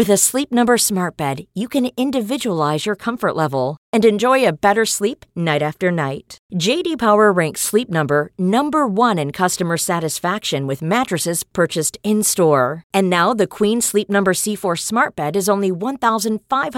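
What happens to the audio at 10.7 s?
Nothing goes wrong at 10.7 s: the speech carries on intact through that moment, with no dropout, click, distortion or other fault to be heard.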